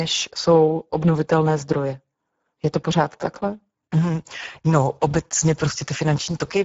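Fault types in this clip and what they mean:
Speex codec: A CELP speech codec that has too few bits to code its excitation signal. The speech sounds rough and noisy throughout, with plainly audible damage. Nothing remains above 7.7 kHz. The coarseness fits a low setting near 10 kbps.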